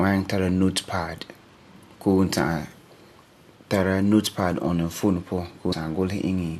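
At 5.72 s compressed frames are skipped: about 150 ms of speech jumps away, fitting seven 21.3 ms frames, leaving a visible spectrogram seam.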